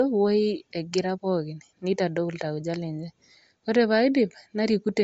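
Bluetooth LC3 compression runs throughout this speech: nothing above 7.7 kHz and a plainly audible breathy graininess up top, likely from a 32 kbps LC3 stream noise-filling discarded highs.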